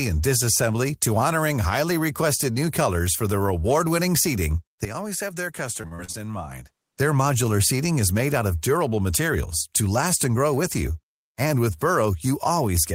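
It's a speech recording, and from 4.85 s to 6.97 s the sound abruptly goes duller and drops about 10 dB with no gap at the handover. Nothing comes through above 13 kHz, and a faint new noise floor sits well under the speech, so the likely cause is the input switched to a poorer device. Inside that stretch, from 5.81 s to 6.35 s, there's repeated packet loss with a robotic sound. Six gaps, the longest 37 ms, get papered over by stretching the previous sound, covering 157 ms (about 29% of the span), and roughly 60 ms is simply gone, which leaves that bit choppy.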